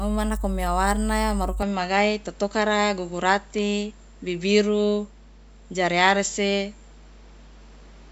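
A speech recording carries mains hum for its whole length: a steady low tone at 50 Hz, with a few low harmonics, sitting only a few decibels under the speech. It sounds like power-line energy leaking in through a ground loop or a nearby transformer. It is a fixed pitch that never drifts and does not follow the speech, which separates it from broadband rumble such as wind, handling or traffic, where the low end is noisy rather than tonal. At 1.62 s, right after "nako mia warna maruka", the sound goes duller and boxier and stays that way to the end at 8.12 s, with nothing above 7.6 kHz. This is most likely the input switched to a poorer device, with the system moving to another microphone or a headset's call profile in mid-recording. The change happens with no silence and with loudness roughly unchanged. A fresh noise floor arrives about 30 dB below the speech, and the tone colour shifts as well. 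That combination distinguishes a different pickup from a mere bandwidth or codec change, which would narrow the top without altering the background noise or the character of the sound.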